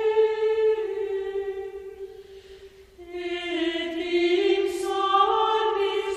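No technical faults are audible.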